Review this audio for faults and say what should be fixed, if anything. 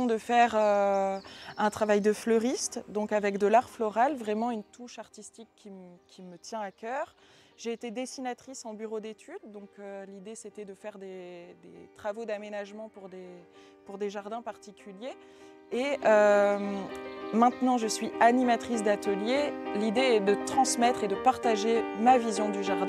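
Zipper noise appears at 4.36–4.85 s, as the level drops by roughly 10 dB, and again at 15.66–16.04 s, as it rises by about the same amount. Each ramp moves in 1 dB steps, some twenty to thirty per second, with no smoothing between them, so every step leaves a faint click. On a spectrogram these show as thin vertical lines across the band; the waveform envelope looks like a staircase. Interpolate gain per sample, or smooth it, instead of stepping it per block.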